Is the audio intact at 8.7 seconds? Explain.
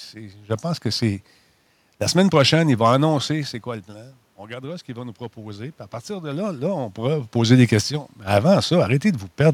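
Yes, the audio is intact at 8.7 seconds, with no fault at that moment.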